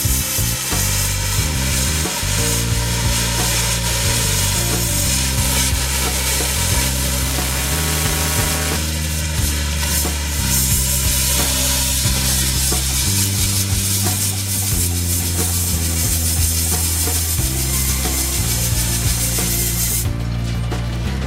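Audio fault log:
7.25–8.76 s, buffer tearing: a steady robotic buzz at 345 Hz, which fits a 128-sample buffer, as a small slice of each buffer replays audio a few milliseconds old between hard joins. Unlike random crackle or dropouts, it is evenly pitched and stays tied to the signal.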